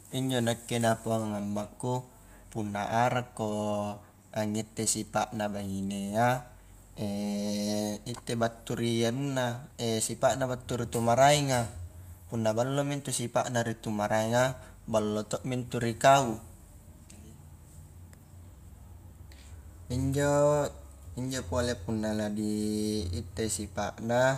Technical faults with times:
none

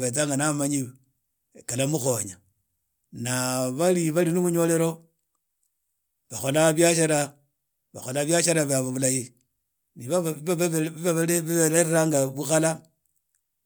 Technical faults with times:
none

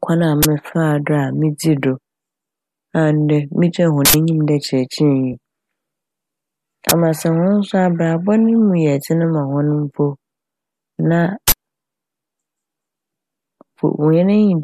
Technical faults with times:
0.43-0.45 uninitialised buffer
4.05-4.14 uninitialised buffer
5.33 AAC frame loss with concealment
6.89-6.91 uninitialised buffer
11.48-11.52 uninitialised buffer

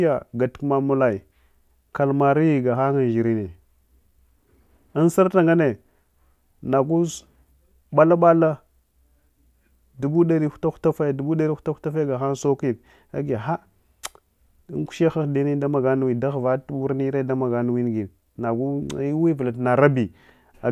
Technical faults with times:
none

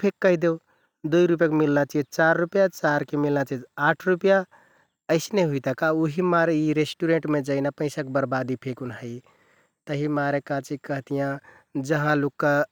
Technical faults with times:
none

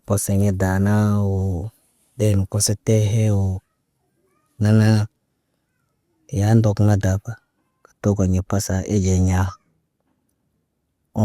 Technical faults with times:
none

